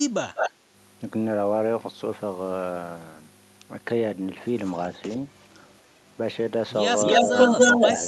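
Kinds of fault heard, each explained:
Echo leak: A delayed copy of the speech, about 193 ms late, returns near 0.35 s at roughly the talker's level, then very faintly near 4.6 s and 5.0 s. From 7.01 s to the end, it comes 283 ms late and louder. This is likely an incompletely cancelled loudspeaker echo.
Background gated by the echo canceller: Between 0.56 and 0.64 s, just after the first echo, the room sound dips by about 6 dB for a brief moment. The canceller pulls the microphone down while the loudspeaker plays, then releases it.
Speech suppressed in double talk: During the loud final echo, the talker's speech dips in pieces, by about 10 dB at 7.21 to 7.34 s and by a few dB at 7.51 and 7.76 s. This is likely the canceller ducking both sides during overlap.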